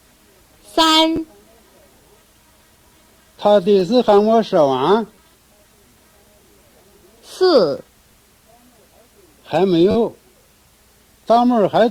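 Five times the playback device ran short of fresh audio and replayed its last buffer, a repeated buffer fault. Each slice is about 10.7 ms long, which fits a 512-sample buffer. Because the slices are so short, each event comes through as a brief buzzy click rather than an obvious stutter. This happens at 1.16–1.18 s, 3.80–3.82 s, 5.15–5.17 s and 7.78 s, and the longest is at 9.91–9.95 s, where the slice loops four extra times. Nothing is skipped afterwards; the sound simply resumes late.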